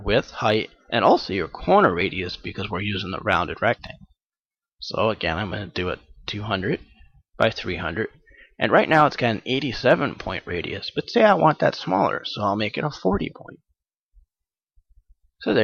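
At 2.01 s and again at 3.87 s the sound jumps abruptly forward, each time skipping roughly 10 ms. The likely cause is a dropped buffer (overrun): samples were overwritten before the software read them, and the audio on either side was spliced together. Unlike a dropout, no silent gap is heard. The audio simply skips ahead, leaving a small discontinuity.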